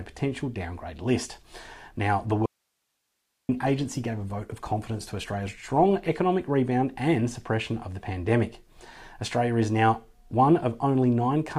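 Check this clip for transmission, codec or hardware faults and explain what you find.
Two faults turn up, overlapping near the start of the clip.

Call bitrate drop, 2.33 to 6.25 s. The call's bandwidth estimate fell and the encoder was pushed from 96 kbps down to 19 kbps, staying at that floor for about 3.85 s. With so few bits, Opus quantises the signal much more coarsely and discards the upper frequencies, so the sound turns muffled, rough and watery before clearing once the rate climbs back.

Audio dropout to a faint residue, 2.46 to 3.49 s. For roughly a second the sound cuts out abruptly, most likely because the incoming signal was lost while the playback path after the break stayed live. The gap isn't silent: only a thin bed of hiss remains, sitting somewhere around 55 dB below the normal level, and the sound then snaps back mid-flow rather than fading in.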